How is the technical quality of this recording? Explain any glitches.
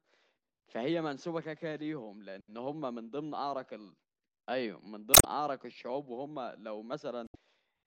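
The speech carries two glitches from damaged data in a compressed stream, at 5.11 to 5.25 s and at 7.24 to 7.36 s, each lasting just over a tenth of a second. Corrupted bytes in the encoded data leave the decoder unable to read the affected frames correctly. It loses frame sync and has to hunt for the next valid header. While it does so, each event comes through as a short chirp, squawk, click or brief hole cutting across the speech.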